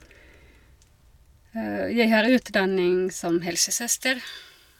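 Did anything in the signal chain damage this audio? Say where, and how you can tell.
Yes. A pre-emphasis stage was left on from 3.50 s to the end at 4.79 s: the treble boost was applied but the matching de-emphasis never was. The speech turns thin, bright and sibilant, with about 11 dB extra at 10 kHz relative to 1 kHz, which fits the J.17 curve.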